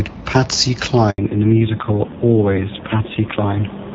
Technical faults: handover gap; fallback to narrowband

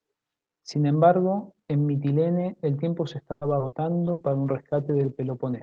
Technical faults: call audio freeze; skip ahead; burst of packet loss; jitter buffer slow-down; call bitrate drop

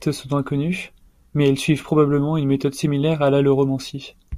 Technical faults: none

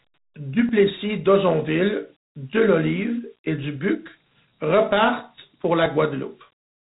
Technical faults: Dialogic VOX ADPCM

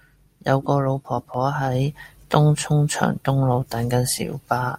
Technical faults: dropped samples

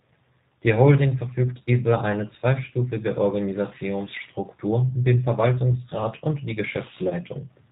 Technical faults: G.729 codec; VoIP packet loss concealed by the speech codec

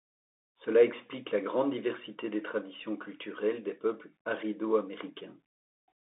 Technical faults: Bluetooth CVSD headset codec

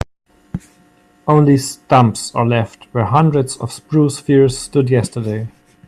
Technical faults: none

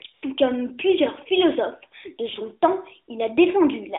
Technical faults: AMR comfort noise

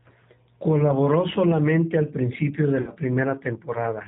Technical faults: G.729 codec; VoIP packet loss concealed by the speech codec

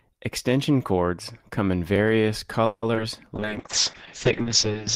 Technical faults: call audio freeze; skip ahead; call bitrate drop; jitter buffer slow-down

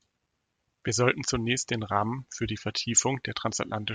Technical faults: none

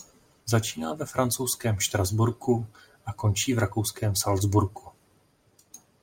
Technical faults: imaging from linear upsampling

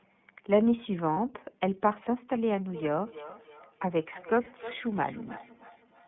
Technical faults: iLBC codec; lost iLBC frames; feedback echo between two devices

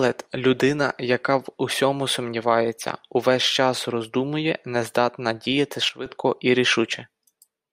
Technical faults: sudden gain jump

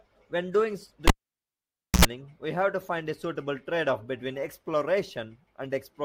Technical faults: cable pulled and plugged in

